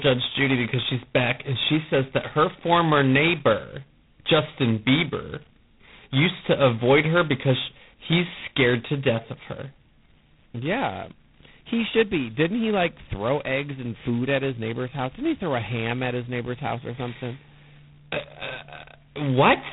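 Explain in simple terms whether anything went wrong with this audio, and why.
Something did go wrong, and it lasts from the first moment to the last. The speech has passed through G.726 ADPCM coding at its lowest quality setting. This codec saves space by sending only a rough guess of how each sample differs from the one it predicted. With so little detail kept, the errors become a harsh, rasping hiss that rises and falls with the speech. Nothing above about 3.9 kHz survives, so the sound is dull and narrow, like an old phone line.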